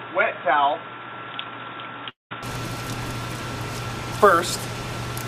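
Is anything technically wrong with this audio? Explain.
Yes. There are three separate technical faults.

From the start to about 2.43 s, the audio is band-limited, with nothing above 3.8 kHz. This sounds like an input switched to a poorer device, most likely a different microphone or a headset's call profile. The narrower band makes the sound dull and boxy. The level sits roughly 5 dB lower. A faint new noise floor sits roughly 55 dB below the signal. There is no gap at the switch itself.

From 2.09 s to 2.33 s there is a long network dropout, likely caused by packets that never arrived. About 0.22 s of real audio is simply missing. The receiver fills the hole by carrying the last sound forward as a fading buzz or hiss. That fill dies away into near silence, which makes up roughly 170 ms of the stretch. When the sound resumes, the lost part never returns.

From 3.17 s to the end, sample clock jitter adds a grainy hiss. 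The converter's clock wanders by around 5 microseconds, so samples land slightly early or late. The timing error hurts most where the waveform changes fastest. The resulting noise sits roughly 25 dB below the signal. It grows on loud and bright passages and disappears in quiet moments.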